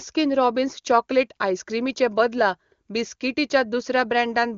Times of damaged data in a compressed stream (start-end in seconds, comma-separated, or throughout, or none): none